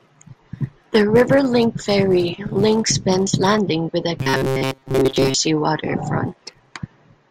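From 4.20 to 5.36 s, right after "with the", the speech collapses into robotic sound from repeated short buffers: a rigid, metallic buzz at 133 Hz that loosely tracks the syllables. The likely cause is audio arriving too slowly, so playback loops a fragment of about 7.5 ms while most of the real signal, roughly seven tenths, is skipped. A spectrogram shows evenly spaced horizontal lines at multiples of 133 Hz, and the waveform repeats identical short cycles.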